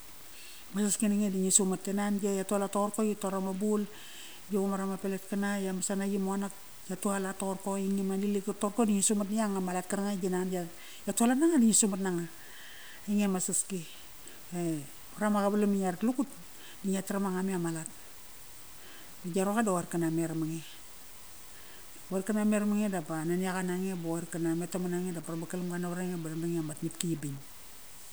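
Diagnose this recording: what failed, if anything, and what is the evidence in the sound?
Low bit depth without dither, likely from a sample-format conversion truncating to 7 bits, leaves grainy, signal-following distortion roughly 20 dB down throughout the speech.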